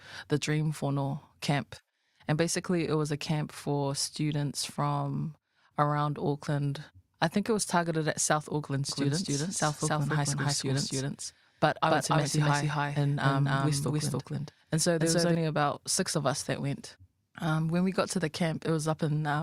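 From 8.89 to 15.35 s, just before "about six of us", the speech doubles with an equally loud, dry copy about a third of a second behind, likely a doubled audio track.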